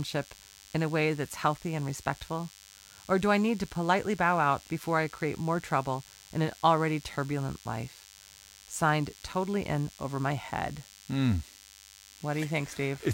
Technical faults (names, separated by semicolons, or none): DECT cordless phone buzz